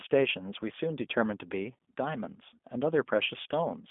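G.729 codec coding runs throughout the speech, and the sound fits an 8 kbit/s G.729A stream. Each 10 ms frame is rebuilt from a vocal tract filter, pitch prediction and sparse pulses, leaving a rough, synthetic texture, a 200 Hz to 3.5 kHz telephone band and nothing above 3.6 kHz.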